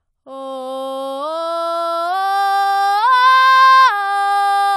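Nothing in this bit of music trips up along the way, so there's no technical fault to point to anywhere in it.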